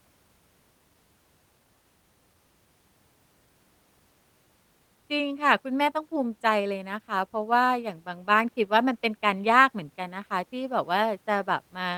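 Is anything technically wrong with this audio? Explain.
No, nothing is technically wrong with this audio.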